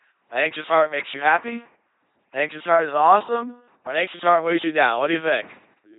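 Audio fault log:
throughout: LPC-10 vocoder. The speech has a heavy buzzing, mechanical robot quality with nothing above about 3.8 kHz, and it flips between harsh buzz and hiss wherever the voicing choice goes wrong. Each short stretch is rebuilt by driving a simple vocal tract filter with either a pulse train or noise, never a mix of the two, so natural breathiness and detail are lost. The heavy damage fits a 2.4 kbit/s LPC-10 coder.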